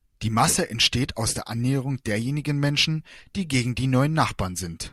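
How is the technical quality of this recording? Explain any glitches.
Two glitches stand out in the speech: a stretch of clipping near the start and a short decoding glitch toward the end.

From 0.41 to 0.87 s there's hard clipping. The level runs about 2 dB past what the chain can pass, so the peaks get sliced flat. Those squared-off tops throw in high harmonics, and you hear a light crackly edge on the louder syllables.

At 3.64 s there's a corrupt frame decoded. It looks like one compressed frame had damaged bits, and the decoder played it anyway, dumping energy at the wrong frequencies for that frame's length. It comes through as a brief, fairly quiet glitch, peaking somewhere around -30 dBFS.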